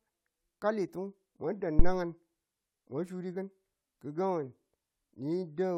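A speech recording with a phantom power thump from 1.79 to 1.96 s: a deep, low-frequency thud peaking at about -9 dBFS and dying away with a decay of roughly 38 ms. The supply voltage on the live input was switched, and the step pushed through the coupling capacitors. Unlike a plosive pop or a handling bump, the thump has no link to the talker's breath or mouth and no rustle of mechanical contact, just a single electrical step that settles on its own.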